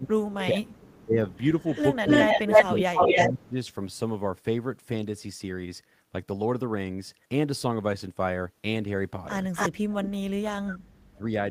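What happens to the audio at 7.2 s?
Nothing goes wrong at 7.2 s; the speech carries on intact through that moment.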